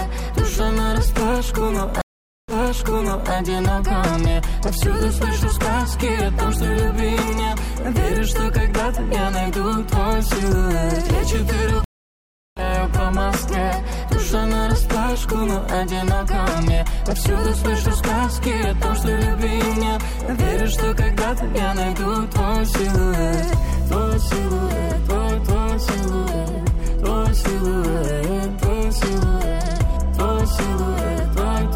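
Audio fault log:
2.01–3.32 s, stream reconnect: about 470 ms of silence, then the audio picks up 840 ms earlier as the fresh decoder replays a resent burst.
11.84–12.63 s, stream reconnect: 722 ms dropout, then playback jumps ahead roughly a second, skipping material the live feed moved past while reconnecting.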